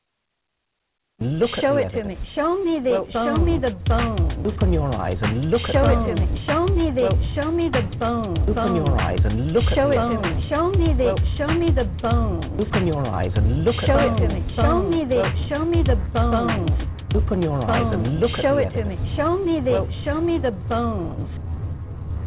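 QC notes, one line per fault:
No faults found in this clip. It has passed through a call path consistent with G.711 A-law coding, and nothing can be heard above 4 kHz, as expected for that narrowband codec.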